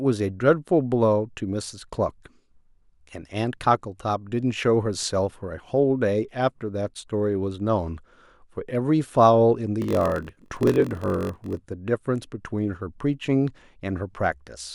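From 9.8 to 11.57 s the speech picks up a steady 46.9 Hz buzz and slows to about 0.938 of its normal pace. This is a block size mismatch (padded): each block written is shorter than the block read next, which fits a 1024-sample read, and zeros fill the remainder, leaving a brief gap at every block. Unlike a sample-rate error, the timbre stays the same, and unlike random dropouts, the gaps fall at an even, buzzing rate.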